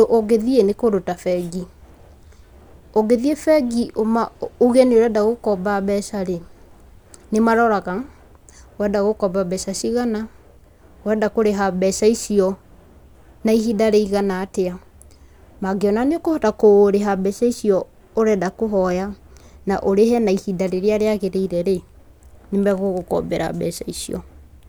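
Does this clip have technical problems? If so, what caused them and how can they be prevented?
No, this speech clip has no technical faults. There is nothing that needs a cause traced or a fix applied.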